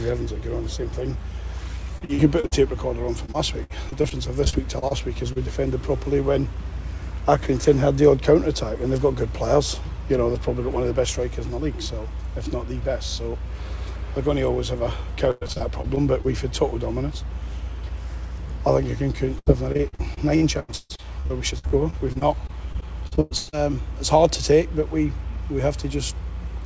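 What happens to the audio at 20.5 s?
At 20.5 s the audio is in the middle of a stretch of repeated packet loss (robotic sound) running from 19.39 s to 23.55 s. Audio packets kept arriving late or not at all, and each hole was patched by extending the sound just before it. The holes are short, the longest about 136 ms, but they come in a rapid run of about two dozen. Together they cover roughly a quarter of the stretch, so the audio turns choppy, with pieces dropped out.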